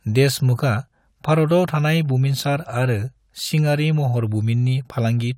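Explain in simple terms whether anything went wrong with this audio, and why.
Nothing went wrong here; the recording has no dropouts, glitches, distortion or other technical problems anywhere.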